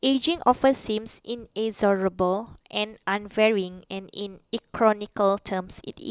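No technical faults are audible.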